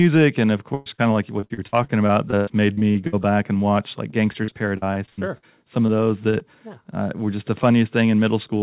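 At 0.74 to 0.88 s, a burst of packet loss drops about 120 ms. The receiver stretches the last sound into a fading buzz or hiss, which shows as smeared, flat content decaying in the spectrogram. At 0.94 to 1.00 s, short concealed packet loss patches about 40 ms with a brief smear, a small discontinuity in the waveform. From 1.40 to 3.15 s, repeated packet loss (robotic sound) brings about a dozen dropouts, the longest about 105 ms, covering about 28% of the stretch. It sounds choppy, with pieces missing and repeated smeared blocks in the spectrogram. From 4.11 to 5.44 s there is more of the same robotic sound, from about nine gaps of up to 82 ms. Further short concealed losses of roughly 20 ms at 5.86 to 5.90, 6.30 to 6.35 and 6.39 to 6.42 s each give a brief smear or wobble. Throughout, nothing appears above 4 kHz, which fits a narrowband call codec such as G.711.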